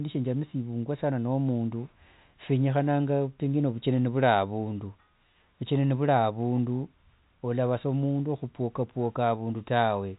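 No technical faults are audible.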